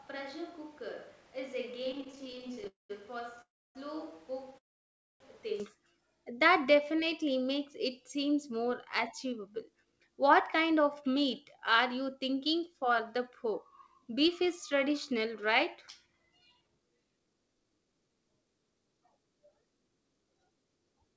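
Switch to a distant microphone, from the very start until 5.6 s: the speech already sounds roomy and hollow, thin in the bass and roughly 10 dB quieter than after the change back. Room noise sits only about 20 dB below the speech. The likely cause is that the close microphone's signal dropped out and a far-off pickup, such as a camera's, was used instead. The return to the close sound at 5.6 s is abrupt.

Repeated stalls (stutter), from 1.82 to 2.67 s: the speech catches about two dozen times, each hitch no longer than 16 ms. Packets kept arriving a little late, so the receiver's jitter buffer ran dry over and over and bridged each gap by continuing the last sound. About 30 percent of this stretch is filler, yet nothing is lost. The speech drags and judders rather than skipping.

Call audio freeze, at 2.67–2.91 s, 3.41–3.77 s and 4.58–5.22 s: the sound stops and its last fragment is drawn out into a brief fading buzz. 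Most of each pause then falls silent: about 0.16 s of the first, 0.29 s of the second and 0.61 s of the third. The speech resumes exactly where it stopped. The likely cause is packets held up in transit until the jitter buffer emptied. The waits of 0.22, 0.34 and 0.62 s are inserted into the timeline, so nothing is cut.

Jitter buffer slow-down, from 6.67 to 7.24 s: the speech runs at about 92 percent speed with its pitch unchanged. Sounds are stretched. The receiver was rebuilding its reserve by repeating single pitch periods and slivers of pauses many times in a row. Together these add about 53 ms.

Jitter buffer speed-up, from 8.70 to 18.09 s: the speech becomes slightly hurried, at about 107 percent speed and still at the same pitch. The buffer held more audio than it aims for, so the receiver shortened the delay by cutting out tiny pieces of one or a few pitch periods again and again. 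Over the nine-odd seconds it trims something like 0.7 s in total.

Throughout, nothing is heard above 8 kHz. That fits the call path's wideband codec at 64 kbps, G.722 by the sound of it.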